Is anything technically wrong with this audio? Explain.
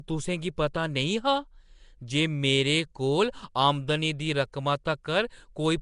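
Yes, there are two faults. Throughout the speech, Nellymoser compression, likely the cause, gives a rough, hissy, underwater smear, with nothing above 10.6 kHz, consistent with a rate around 44 kbps. At 4.53 s, pre-echo puts about 10 ms of hiss before a sharp attack, because the codec spreads block-sized quantisation noise ahead of it and softens the onset.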